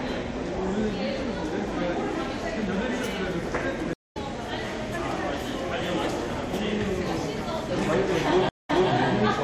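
Two stream reconnects, at 3.93 s and 8.49 s: brief dropouts of 167 and 146 ms, then the sound picks up roughly 200 ms ahead, then 287 ms back, replaying a bit.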